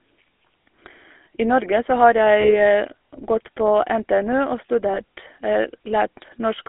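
GSM full-rate codec, throughout the clip: the speech has passed through the original GSM coder, which models the vocal tract and excites it with a sparse train of regularly spaced pulses, discarding most of the excitation detail. The damage is plainly audible as a buzzy, gravelly roughness over the voice, consistent with a 13 kbps full-rate stream. The line band runs from about 250 Hz to 3.5 kHz, so low warmth and upper brightness are both gone.

Lost GSM frames occur at 0.62 to 0.64 s, 2.40 to 2.56 s, and 4.94 to 4.99 s. At each point the decoder received unusable data, so it reused the parameters of the last good frame and played them again. This causes a brief rough, metallic ringing where the speech should continue. The first and third gaps fit one lost 20 ms frame, and the middle one fits two frames, about 40 ms.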